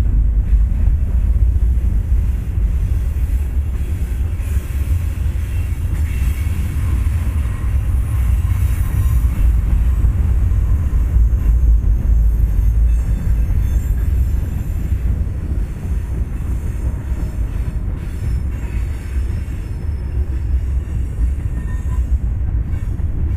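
Nothing technically wrong turns up anywhere in this recording of sounds; there's no fault to point to at any moment.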